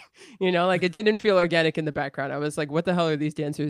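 A speech recording turns choppy and robotic from 0.93 to 1.43 s, between "you know like it" and "in the background I", with pieces of sound missing. This is repeated packet loss: several gaps, the longest about 60 ms, together about a third of that half second, were each patched by stretching the last sound before the next gap arrived. A brief smear follows at 1.91 to 1.95 s, between "in the" and "background I was like". This is short concealed packet loss: about 20 ms never reached the decoder in time, and the receiver filled it by continuing the preceding sound before blending back into the real audio.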